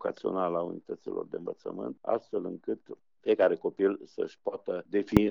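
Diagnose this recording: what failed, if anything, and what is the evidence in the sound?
Codec stage: damaged data in the compressed stream produces a brief glitch at 5.17 s, where the decoder misread corrupted frames and lost sync before recovering.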